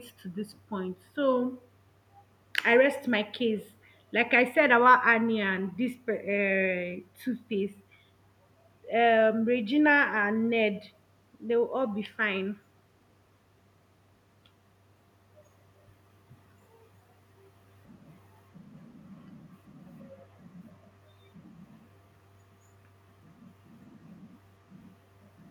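No audible technical faults.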